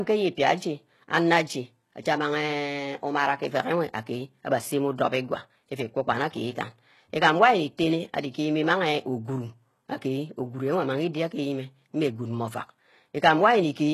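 From start to finish the speech has a synthetic, metallic top end: s sounds come out gritty and lisping, and nothing reaches above about 12.3 kHz. The treble is there but doesn't match the voice beneath it, as if copied up from lower down. This is heavy damage from HE-AAC compression, likely at a rate near 16 kbps, where spectral band replication rebuilds the treble from lower bands under a coarse envelope, so harmonics misalign across the crossover.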